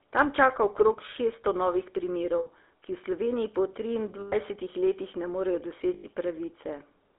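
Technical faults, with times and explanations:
Throughout: GSM full-rate codec. The speech has a steady buzzy, gravelly roughness because the codec models the vocal tract and excites it with regularly spaced pulses, discarding most of the fine detail of the source. The sound fits a 13 kbps GSM full-rate stream. Its band runs only from 300 Hz to 3.6 kHz, which removes the sibilant air. Unlike MP3-style artefacts, there is no swirly or watery smearing, only this constant rasp.
2.38–2.49 s, 4.20–4.34 s and 5.94–6.05 s: lost GSM frames. The first break comes right after "čaka okrog šeststo novih". At each break the decoder kept repeating the last good frame's settings, so the sound freezes into a rough, metallic ring instead of dropping out. The gaps last 80 ms, 120 ms and 100 ms, which fits roughly four, six and five lost 20 ms frames. Unlike a clean dropout or a click, the held ring does not cut to silence.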